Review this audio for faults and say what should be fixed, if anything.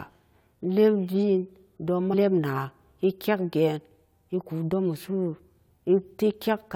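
At 2.13 s there is a brief glitch caused by damaged data in a compressed stream. Corrupted bytes in the encoded speech made the decoder misread a frame, lose sync and hunt for the next valid header. On a spectrogram it shows as a thin vertical disturbance cutting across the speech harmonics. The waveform shows a sudden spiky or flattened patch that breaks the surrounding envelope. To prevent it, carry the stream over a transport with error checking and re-fetch or conceal frames that fail their checksum.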